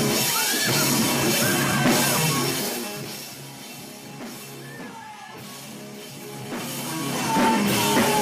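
From 2.32 to 3.34 s, a rapid ticking rides on the sound as it drops by around 15 dB. This is zipper noise: the level falls in unsmoothed 2 dB steps, about ten per second, each jump leaving a small click.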